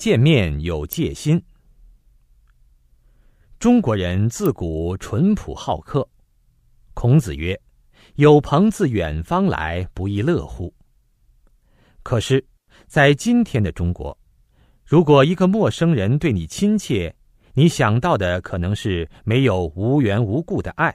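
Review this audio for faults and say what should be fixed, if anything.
A nearby switch, motor or static discharge likely arced and induced brief spikes into the audio line, an electrical switching spike. In this speech recording that shows up as two sharp snaps sitting on top of the voice, at 0.93 s and 4.46 s, each only a few milliseconds long. The first peaks around -10 dBFS and the second is louder, near -5 dBFS. Remove them with a declicker or by redrawing the waveform, and to prevent a recurrence, use balanced, well-shielded cabling routed away from switches and motors, ideally on a separate power circuit.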